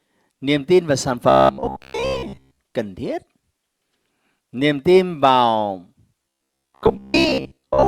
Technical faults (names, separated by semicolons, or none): robotic sound from repeated short buffers